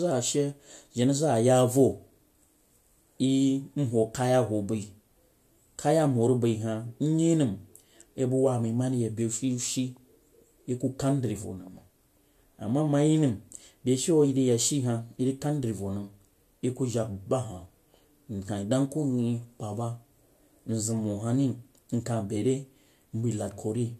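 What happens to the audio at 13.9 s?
Nothing goes wrong at 13.9 s: the speech there is intact and continues without any audible fault.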